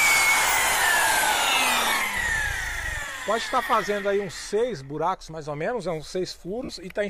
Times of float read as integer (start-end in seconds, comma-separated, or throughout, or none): none